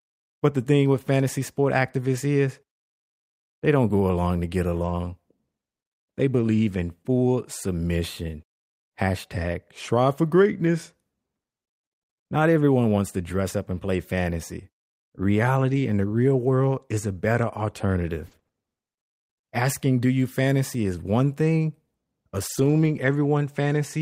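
A lost packet rebuilt from error correction occurs at 2.15 to 2.17 s, just after "thing with fantasy sport". The 20 ms stretch, which fits a single lost packet, was replaced by the low-bitrate backup copy carried in the following packet. There is no gap, but that instant sounds coarser and noisier. The same repair happens at 4.77 to 4.91 s, after "go along to get". Here about 80 ms was rebuilt, consistent with four lost packets. The roughness lasts longer.

Scattered short gaps run from 15.71 to 18.55 s. About five small holes, roughly 120 ms in total and the longest around 40 ms, were patched by extending the preceding sound, which covers about 100 ms. The audio stays clear but has brief ticks, smears and hiccups.

A longer lost-packet repair from error correction spans 22.49 to 23.11 s. About 320 ms was rebuilt from the lower-quality copies, so those rebuilt parts of the stretch turn rougher and noisier.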